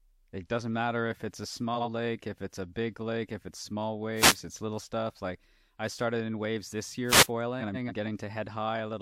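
At 1.75–1.88 s, between "matter if it's a" and "lake if it's a", frames out of order swap two adjacent blocks of 46.4 ms, giving a garbled flutter, visible as sharp vertical seams on a spectrogram. At 4.17–4.36 s, after "lake if it's small" and before "it's little stuff", a wireless microphone noise hit occurs as the FM radio link fades and receiver noise surges. It sounds like a brief swish of static and shows as a broadband grey smear over a raised waveform floor. A second hit follows at 7.08–7.26 s, after "started in waves this". At 7.60–7.92 s, blocks of 139.3 ms, which fits runs of three frames, play exchanged, with the same seams and no lost time.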